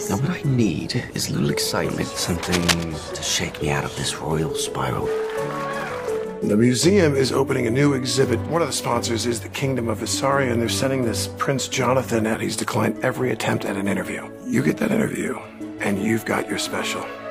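Cable scratch noise appears from 2.43 to 2.96 s, a half-second patch of dense, ragged crackle and rustle laid over the sound and sitting only a little below it in level. The bursts are uneven in spacing and strength, the way noise behaves when an electrical contact keeps making and breaking. The likely cause is a worn cable, connector or control being moved, its contact resistance jumping about rapidly and injecting that noise into the signal.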